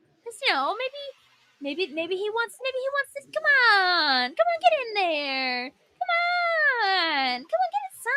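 From the start, the sound pumps and thins, with sustained parts and decaying tails sinking while sharp onsets come through intact. The level moves by something like 10 dB as this happens. This is a noise suppressor applied to music or sounds: a processor tuned for speech treats steady, tonal or reverberant material as background noise and pulls its gain down, while transients escape the reduction.

At 0.01 to 0.26 s the sound dips sharply, by about 17 dB at its deepest. It dips again from 1.13 to 1.61 s, the longest stretch at roughly half a second, by about 16 dB. A third dip, from 5.71 to 6.0 s, reaches about 17 dB. Each is sound cut by the noise suppressor: the processor judged these passages more noise-like than their surroundings and attenuated them harder, leaving audible holes where the sustained content should carry on.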